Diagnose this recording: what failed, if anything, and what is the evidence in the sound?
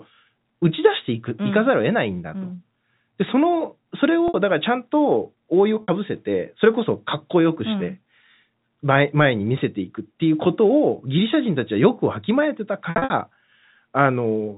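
The network dropped packets, and the receiver covered them with packet loss with pitch repetition, looping the last pitch period to bridge each gap. At 4.28 to 4.34 s and 5.83 to 5.88 s the sound briefly holds a buzzy tone for about 60 ms, which fits three 20 ms packets. From 12.9 to 13.1 s it's a scattered burst, about 160 ms lost across 200 ms with no run over 60 ms, so the holds stutter.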